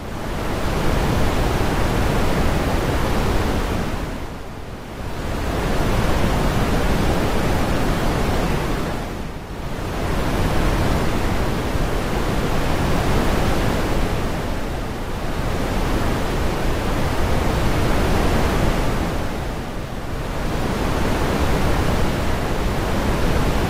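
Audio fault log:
5.05–11.05 s, adaptive stream at a lower bitrate: quality abruptly drops with added codec artefacts, with no gap, consistent with a drop from around 64 to 24 kbit/s.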